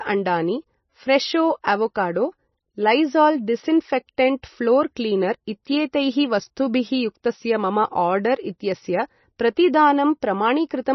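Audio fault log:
Throughout, MP3 compression: watery, swirly speech with nothing above about 5.9 kHz, likely from heavy encoding near 24 kbps that cuts treble and drops weak components.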